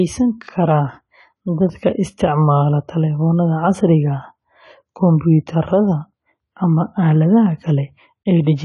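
A speech recording that throughout is dull and smeared, with nothing above 11.5 kHz and a fizzy, warbling texture on sibilants, the likely result of AAC compression at a low rate that fits about 32 kbps. Unlike a plain low-pass filter, the band below the cut-off is also damaged, with holes or substituted noise.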